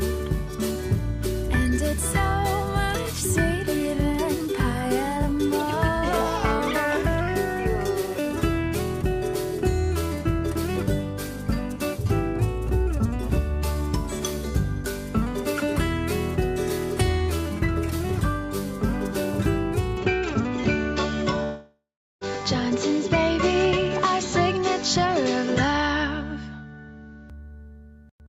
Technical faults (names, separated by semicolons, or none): input switched to a poorer device; long network dropout